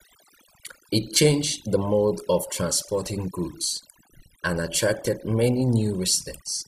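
From start to finish the speech carries overdone noise removal. A noise reducer set far too aggressively has pushed individual frequency bins down to nothing wherever their level sat close to its noise estimate. Low-level parts of the voice were caught and cut along with the noise. The pauses fall to near silence sprinkled with chirping, twinkling specks. On a spectrogram the background shows as dark space dotted with isolated bright flecks, and the harmonics look ragged and broken at their edges.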